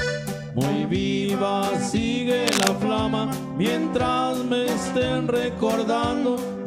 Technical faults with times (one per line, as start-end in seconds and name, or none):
2.46-2.68 cable scratch noise